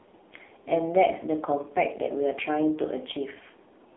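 Speech carried through the AMR narrowband mobile codec for its whole length: heavily buzzy and synthetic, consistent with a low mode near 5.9 kbps. The spectrogram shows a band from 250 Hz to 3.6 kHz, with nothing above 3.8 kHz.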